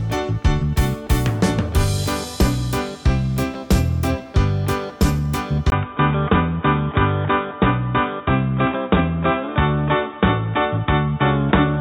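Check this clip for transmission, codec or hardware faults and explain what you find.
One fault appears. At 5.7 s the input was likely switched to a poorer device, after a 20 ms gap. That device passes a narrower band, so nothing above 3.8 kHz remains to the end. The sound turns dull and boxy at a similar level, with faint new background noise.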